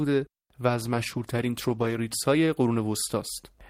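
From 0.76 s to 2.05 s a call bitrate drop makes the speech rougher and more watery as the encoder codes it more coarsely. This fits a bandwidth-driven fall from about 32 kbps to 18 kbps, held at its lowest for roughly 1.2 s before recovering.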